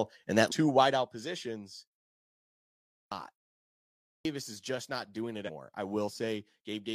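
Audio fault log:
0.47–0.52 s and 5.44–5.50 s: damaged data in a compressed stream. In two places the compressed stream carries corrupted bytes, so the decoder misreads the frames there, loses sync and has to hunt for the next valid frame header. Each break is brief, about 50 to 60 ms, and comes through as a short chirp or squawky blip cutting into the speech.
2.75–3.12 s and 3.91–4.25 s: clipped start after a pause. The output device drops into a sleep state during silence, about 0.9 s before the first event and 0.6 s before the second, and needs time to wake and lock again. The opening of the speech that follows each pause is swallowed: about 0.37 s is lost the first time and about 0.34 s the second, so the speech begins abruptly, missing its first sounds.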